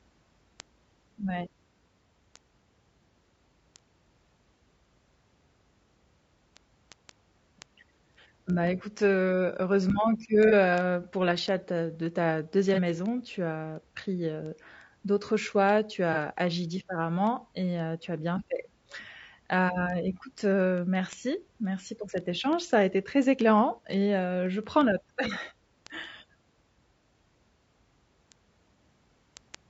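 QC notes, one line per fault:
Throughout: low-delay AAC compression. Speech is rough and grainy with noise between harmonics, likely AAC-ELD near 32 kbps. The spectrogram shows smeared harmonics and a thin, synthetic top band.
0.25–29.5 s: word clock ticks. Sharp single-sample clicks of uneven strength, about every 0.2 s (around 150 in total). This fits an unlocked clock drifting roughly 150 ppm. Thin vertical lines at regular spacing.
10.49 s, 12.74 s, 16.13 s: AAC frame loss with concealment. Each is a 30 ms patch the decoder filled from the previous spectrum, sounding smeared and noisy. Each shows as a blurred, broadband smudge on the spectrogram.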